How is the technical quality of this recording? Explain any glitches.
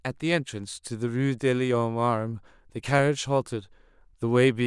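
Two brief glitches interrupt the speech, at 2.99 s and 4.01 s. Both are likely dropped samples: a fraction of a millisecond vanished from the stream, so the waveform jumps abruptly, leaving a single sharp click each time.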